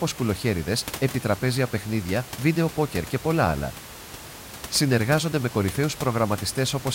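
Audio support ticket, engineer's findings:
No fault found in the speech; room noise sits about 15 dB below the voice, captured with the recording rather than introduced by the system.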